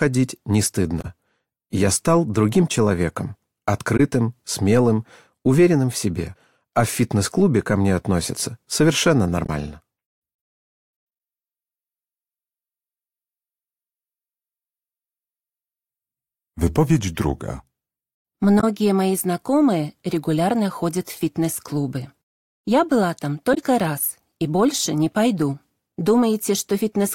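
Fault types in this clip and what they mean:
Damaged data in a compressed stream: parts of the encoded bitstream were corrupted, so the decoder misread those frames and lost sync while searching for the next valid header. This is heard as five brief chirps or blips, each lasting about 40 to 80 ms.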